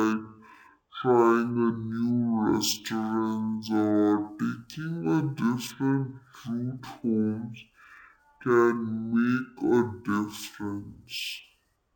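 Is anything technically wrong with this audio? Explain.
Yes. Throughout, this is stereo read as mono. The interleaved left and right samples play as one channel, so the speech runs at half speed, an octave low.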